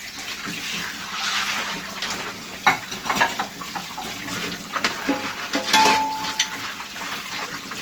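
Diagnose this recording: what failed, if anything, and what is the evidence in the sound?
The codec stage failed with generation loss throughout: the sounds are swirly, smeared and hollow, with blurred attacks, and the band stops near 20.3 kHz, which fits Opus at around 48 kbit/s. Several likely encode-decode passes on shifting frame grids stack quantisation noise, so a spectrogram shows accumulated noise and smeared transients.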